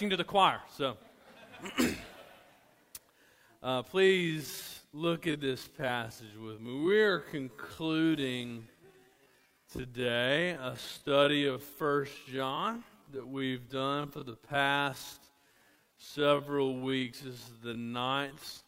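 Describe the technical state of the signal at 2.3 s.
At 2.3 s the signal is intact, with no dropout, clipping, glitch or other technical fault.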